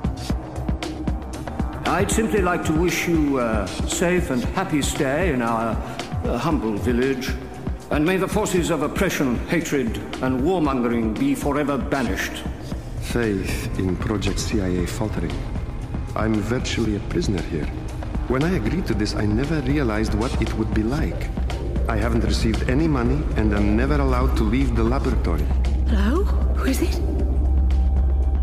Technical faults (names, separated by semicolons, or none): overlap between stream segments